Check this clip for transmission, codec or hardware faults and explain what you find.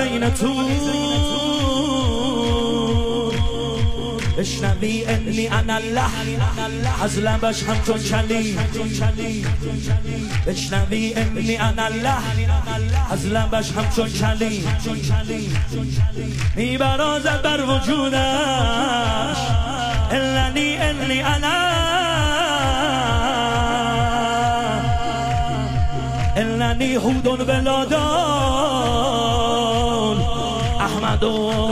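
No faults turn up anywhere in the clip. The sound continues without any break or disturbance that would point to a problem along the signal chain.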